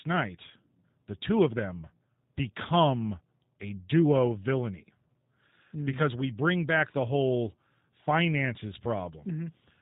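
From start to end the speech carries G.729 codec damage, plainly audible. Nothing above 4 kHz survives, and each 10 ms frame is rebuilt from a vocal tract filter, pitch predictor and sparse pulses, giving a rough, slightly synthetic texture that fits G.729A at 8 kbit/s.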